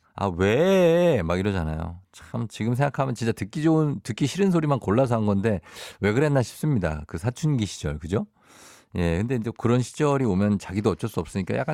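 Nothing here jumps out as a technical fault; the speech just runs along from beginning to end without anything catching the ear.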